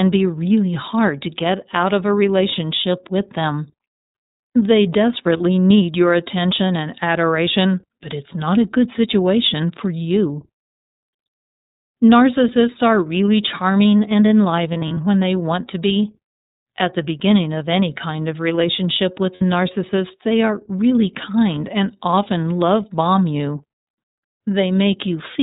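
iLBC codec damage runs through the whole 25-second speech clip: the sound is cut off above 4 kHz and has a plainly rough, synthetic edge. This fits iLBC's 13.33 kbps mode, where each 30 ms frame's excitation is coded on its own. Lost iLBC frames occur at 5.37 s, just before "need your attention and", where about 30 ms is bridged. From 14.73 to 14.97 s, between "are really charming and" and "when they want to", short gaps scattered over about 240 ms add up to 120 ms. From 19.35 to 19.42 s, between "kind of relationship with" and "narcissist they are really", 60 ms is bridged. In each gap the decoder repeats the last pitch cycle mixed with noise, giving a brief held, buzzy vowel, and the speech recovers at once.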